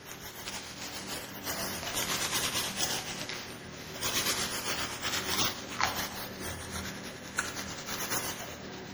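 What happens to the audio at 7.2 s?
At 7.2 s you're hearing generation loss, and it isn't confined to that moment; it runs through the whole clip. The sound is swirly, smeared and hollow, with transients blurred, more degraded than a single lossy pass would leave it. The likely cause is repeated MP3 decoding and re-encoding, around seven rounds, at a rate that fits 64 kbit/s. Each pass quantises on a shifted frame grid, so the noise and spectral gaps keep piling up.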